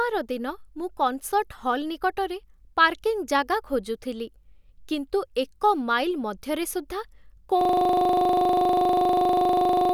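At 7.61 s, right after "ଏକ ମାଇଲ୍ ମଧ୍ୟରେ ସୁଦ୍ଧା", a system hang loop takes over until the end: one 40 ms slice repeats identically, giving a steady 25 Hz buzz rather than a stutter, because the stalled system leaves the hardware replaying one buffer.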